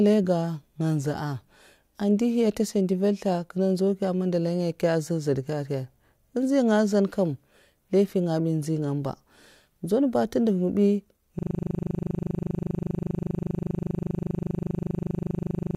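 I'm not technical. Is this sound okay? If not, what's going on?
No. A system hang loop starts at 11.39 s and runs to the end. The computer froze while the sound hardware kept replaying one 40 ms scrap of the speech, over a hundred times, so you hear a steady buzz repeating 25 times a second.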